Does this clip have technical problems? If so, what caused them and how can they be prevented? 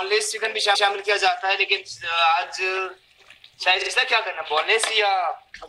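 Yes: repeated frames at 0.74 to 0.88 s (a 139 ms block replayed once) and 3.81 to 3.90 s (a 46 ms block replayed twice) stutter because compressed frames were duplicated. Use checksummed, sequence-numbered transport or writing so duplicate frames are dropped before decoding.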